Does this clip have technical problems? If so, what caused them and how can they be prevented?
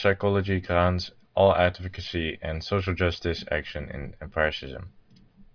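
No, there are no technical problems in this recording.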